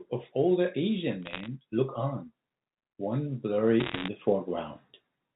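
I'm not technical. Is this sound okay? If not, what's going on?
No, not quite. There are two short bursts of crackle from bit errors on a digital phone line: one from 1.23 to 1.46 s, and a heavier one from 3.80 to 4.08 s, with roughly three times as many errors. On the digital phone link, occasional bits of data got flipped, and each one knocks a single tiny slice of sound out of place. When a flip hits an important bit, that makes a sharp little tick, and clusters of them sound like crackle over the speech, which comes through unchanged underneath. The phone-line sound itself, with its narrow telephone tone, is just how that kind of line works.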